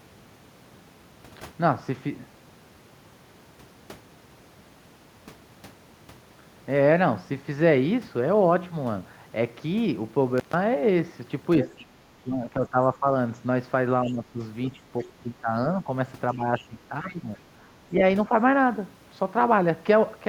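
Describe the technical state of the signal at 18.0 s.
Speech suppressed in double talk: the echo canceller likely attenuated speech along with the echo, so from 17.96 to 18.31 s it dips about 5 dB.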